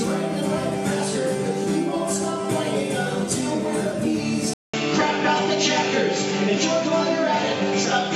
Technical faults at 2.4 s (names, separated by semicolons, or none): none